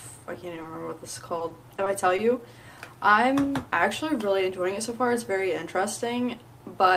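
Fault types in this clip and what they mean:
short concealed packet loss: A brief smear near 0.62 s, where about 20 ms of audio never arrived and the receiver bridged the hole by extending the preceding sound.
repeated packet loss (robotic sound): Choppy sound from 1.38 to 2.20 s, as five holes of up to 20 ms each were patched one after another.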